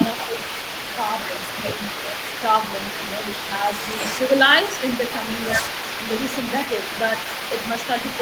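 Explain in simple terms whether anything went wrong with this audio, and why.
Yes, two things went wrong. The first is an echo leak: a second, quieter copy of the speech trails the original by 217 milliseconds, about a fifth of a second, from the start to 4.42 s and again from 4.72 s to 8.2 s. This is likely one side playing the call on a loudspeaker while its echo canceller let some of that sound slip back. Unlike ordinary room reverberation, which is a smooth blur, this is a distinct delayed repeat.

The second is speech suppressed in double talk, a brief dip in loudness from 0.26 s to 0.32 s, lasting well under a tenth of a second. It likely happened because both sides spoke at once, so the echo canceller couldn't tell the talker from the echo and turned both down. What sets it apart from a network dropout is that the sound only softens rather than vanishing or stuttering, and it coincides with overlapping talk.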